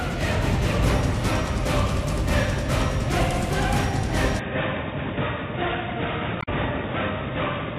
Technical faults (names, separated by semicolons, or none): input switched to a poorer device; damaged data in a compressed stream